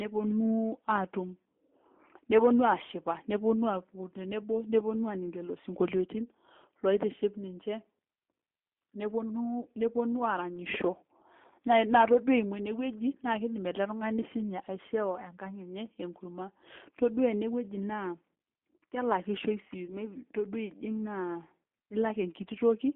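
Throughout, the speech sounds narrow, slightly rough and synthetic, confined to roughly 200 Hz to 3.5 kHz, with plainly audible coding damage. That is the G.729 codec at work, rebuilding each frame from a vocal-tract filter, pitch predictor and sparse pulses, which fits an 8 kbit/s G.729A stream.

From 19.86 to 19.94 s, the speech briefly smears into a buzzy or noisy, fading sustain and stays weak or distorted just afterwards. This is VoIP packet loss concealed by the speech codec. About 20 ms went missing, which points to a single lost packet. The decoder extended the last pitch and filter at falling gain, and its frame-to-frame memory prolonged the disturbance past the gap.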